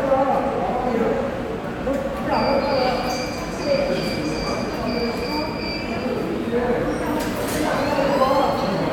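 No technical faults are audible.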